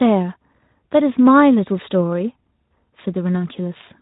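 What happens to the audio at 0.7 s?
Nothing goes wrong at 0.7 s: the speech carries straight through that moment with no dropout, glitch or distortion, only the narrowband sound of the Speex codec, which leaves nothing above about 3.8 kHz.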